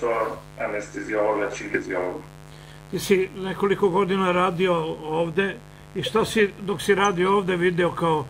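A mains buzz, locked to 50 Hz, runs underneath the whole clip at about 20 dB below the sound. Switching spikes twice per mains cycle give it its raspy edge. On a spectrogram it forms evenly spaced horizontal harmonic lines stacked well up into the kilohertz range.

Between 1.73 and 1.75 s there is a skip ahead. Around 0.4 s of audio was discarded while later material was already queued, and the two sides are butted together with no silence. The waveform shows an abrupt seam, and spectrogram contours break discontinuously.

From 1.83 to 3.36 s a jitter buffer speed-up drains the excess delay. Short pitch-period slices are cut out repeatedly, taking roughly 150 ms in total. The sound plays at 109% speed without a pitch change and feels hurried. Spectrogram events crowd closer together while harmonic spacing stays the same.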